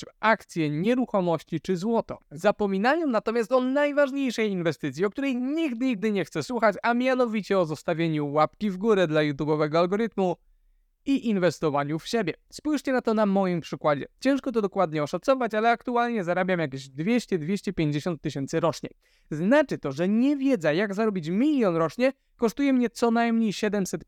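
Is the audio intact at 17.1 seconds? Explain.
Yes, the audio is intact at 17.1 seconds, with no fault heard at that moment.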